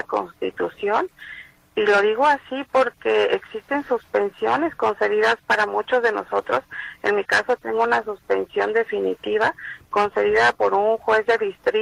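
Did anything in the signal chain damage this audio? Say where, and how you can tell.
No, nothing in the signal chain damaged this audio. No stage, from capture through to playback, leaves any audible sign of damage.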